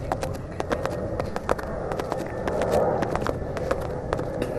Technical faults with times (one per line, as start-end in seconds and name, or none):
0.00-4.59 MP2 compression